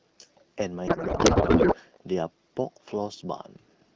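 From 0.87 to 1.75 s a codec payload misread replaces the speech with garbled noise and warble that barely tracks it. The AMR-WB frames, coded at a rate that fits 12.65 kbit/s, are packed octet-aligned but unpacked as bandwidth-efficient, so fields land wrongly.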